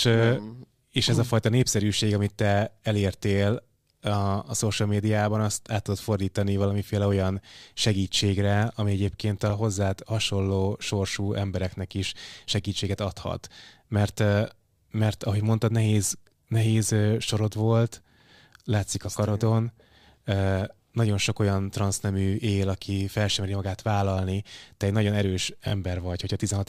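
A speech clip with two brief stutters: at 9.50–9.52 s, after "segítségre ami egyébként a", a tiny slice sounds twice, and at 25.68–25.72 s, after "egy nagyon erős", one sounds three times. Both are repeated buffer faults, where late data made the device replay its last 20 ms buffer with hard joins.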